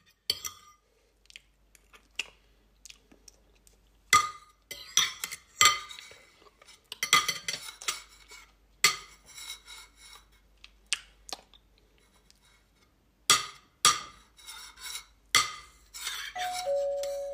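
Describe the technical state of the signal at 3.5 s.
At 3.5 s the signal is intact, with no audible fault at that moment.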